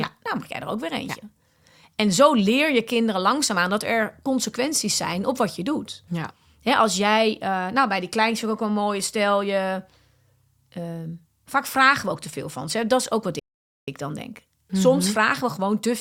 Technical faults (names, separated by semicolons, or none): playback stall